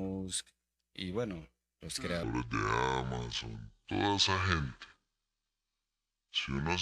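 Section at the wrong speed from 2.23 s to the end of the speech clip, right after "y bueno los": playback slows to 0.63x, dropping pitch about seven semitones, likely from a wrong-clock conversion.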